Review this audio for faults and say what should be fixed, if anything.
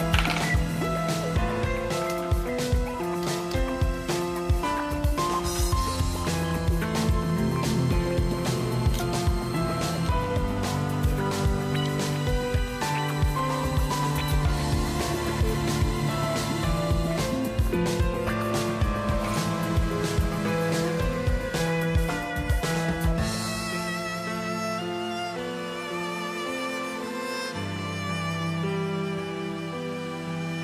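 Nothing stood out on listening, so there is nothing here that needs fixing.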